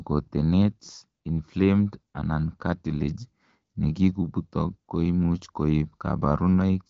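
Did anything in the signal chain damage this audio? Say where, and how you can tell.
No, nothing here sounds damaged: the speech simply tops out around 7.7 kHz, the way the AMR wideband (HD Voice) codec carries a call, and its light coding texture fits a mid rate of about 12.65 kbit/s doing its ordinary job.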